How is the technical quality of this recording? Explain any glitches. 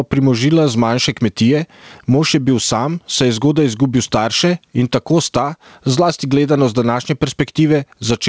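The recording has one problem that runs through the whole clip: gain pumping. The audio stops at 8 kHz, which fits a wideband call codec.

The gain pumping lasts from start to finish. The swing is around 15 dB. The likely cause is input gain set far too high, with a fast limiter clamping each peak. Loud and soft passages sound squashed together.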